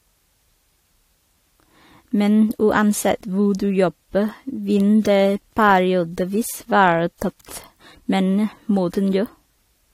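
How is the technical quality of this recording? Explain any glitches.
The recording has one fault running through the whole speech clip: the sound of transcoding between lossy codecs, a likely cause. From start to end there is a hard ceiling at 16.5 kHz, with two overlapping layers of artefacts: the artefacts of each codec heard together. On a spectrogram, energy stops flat at 16.5 kHz and the upper bands look patchy and blocky. That pattern fits audio encoded by an older codec, possibly WMA, then re-encoded to AAC-LC at a low bitrate, with the second encoder spending its bits on the first one's damage.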